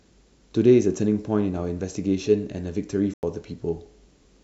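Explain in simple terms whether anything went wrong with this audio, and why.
Two things went wrong. At 1.57 s there is a corrupt FLAC frame: damaged data inside one compressed block was decoded anyway, so for about 45 ms the speech is spoiled by wrongly decoded sound, after which the next intact block plays cleanly.

At 3.12 s there is a corrupt frame muted: the player rejected damaged data and substituted silence, so the speech drops out abruptly for about 0.11 s until 3.23 s. That length fits two lost blocks. The timing afterwards stays correct.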